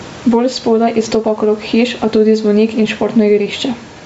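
A speech recording with two faults running through it from start to finish. The first is gain pumping. The level swings by around 10 dB. Loud and quiet syllables sit unnaturally close together and the delivery sounds squashed. This points to input gain set far too high, with a fast limiter or compressor likely clamping down on every loud onset and releasing in the gaps. The room noise sits roughly 31 dB below the speech. The second is Bluetooth LC3 compression, which is plainly audible. The voice has a grainy, breathy edge, with the upper part of the spectrum thinned out and replaced by noise-like fill rather than real detail. This fits the LE Audio LC3 codec likely running at around 48 kbps with 10 ms frames. At that rate the encoder discards much of the high band and substitutes synthetic noise. The band also stops at 8 kHz, set by the call microphone processing.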